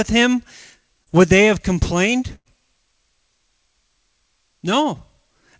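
A brief smear from 1.04 to 1.09 s, just before "would they have complained", is short concealed packet loss: about 30 ms of the call arrived too late, and the receiver patched roughly 25 ms by extending the preceding sound before blending back into the real signal.

From 2.35 to 2.48 s, right after "would they have complained", the sound stretches into a held, fading tail before resuming further on. This is a burst of packet loss, with roughly 90 to 100 ms concealed and a small slice of audio skipped. Throughout, the G.722 call codec leaves nothing above 8 kHz.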